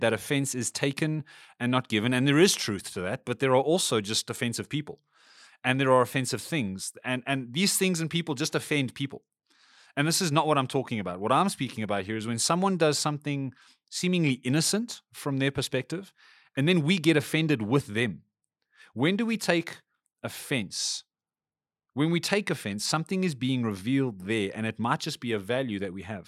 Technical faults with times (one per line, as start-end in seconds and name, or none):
none